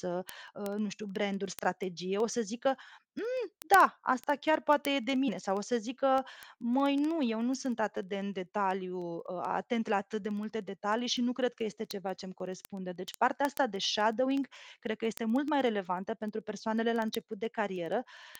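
A receiving device running on its own clock, unsynchronised with the sender's digital link and drifting by roughly 400 parts per million, causes word clock ticks: from 0.11 s to 18.35 s, one sample slips about every 0.07 s, giving a steady stream of around 300 sharp ticks under the speech.

Compressed frames skipped at 5.27 s and 17.77 s, missing from the stream or rejected by the decoder as damaged. Each time the speech jumps forward by roughly 20 ms.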